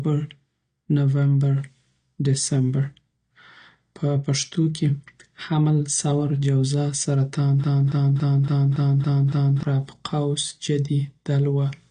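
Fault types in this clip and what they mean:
AAC compression: the speech sounds dull and smeared with nothing above 9.7 kHz, a lowpass and spectral thinning likely from low-bitrate AAC-LC, around 32 kbps.
Broken-record loop: from 7.64 to 9.63 s a 281 ms fragment repeats seven times back to back, likely a stalled stream resending its last buffer.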